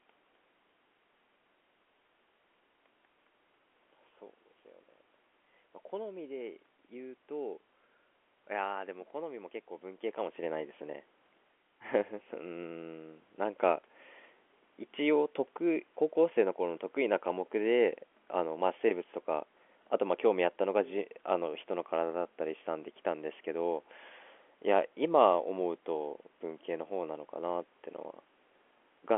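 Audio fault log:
Nothing stood out on listening to this recording beyond the ordinary sound of a telephone line.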